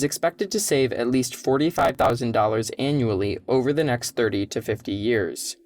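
Just after "to save at least", from 1.74 to 2.10 s, a gritty burst of crackle tears through the speech. This is processor overload crackle: the processor missed dozens of buffer deadlines in a row, each skipping a few milliseconds of audio and leaving hard-edged gaps.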